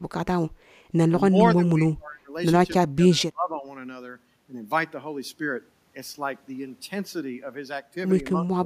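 From 1.29 to 2.33 s and again from 2.86 to 3.67 s, the speech dips hard in pieces, by roughly 25 to 30 dB. A shorter, milder dip follows at 8.42 s to the end. This is speech suppressed in double talk, likely an echo canceller mistaking the talker for echo.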